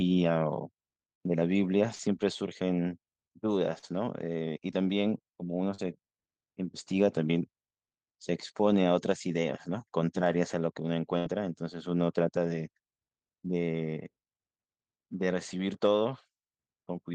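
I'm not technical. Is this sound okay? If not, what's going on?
No, not quite. There are a few small hiccups in the speech where bits of the call got lost on the way.

The first kind is short concealed packet loss, at about 1.95, 3.79 and 5.75 seconds. Each time, roughly 40 milliseconds of audio never arrived in time. The receiving end papered over the hole by stretching out whatever sound came just before, then slid back into the real audio. You hear it as a quick smear or tiny wobble.

The second is a burst of packet loss, from about 11.18 to 11.28 seconds. This time around 80 milliseconds went missing in one go, too long to hide neatly. The receiver kept the last sound going and let it fade, so you get a brief held buzz or hiss. The speech then picks up a little further along, and whatever fell in that gap is simply gone.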